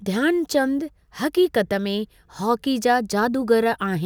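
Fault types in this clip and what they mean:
Sample clock jitter: the converter's timing wanders by around two microseconds, so each sample lands a touch early or late, and steep parts of the speech waveform pick up the largest errors. Here it is a faint grainy hiss, roughly 40 dB below the speech, riding on louder and brighter syllables and gone in pauses. A spectrogram shows a diffuse noise haze tracking voiced energy, densest at high frequencies; the waveform looks nearly unchanged.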